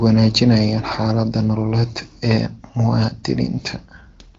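Speech over an AMR wideband (HD Voice) path whose quality fits a rate around 18.25 kbit/s, with nothing above 7.4 kHz as that codec implies, and no technical fault present.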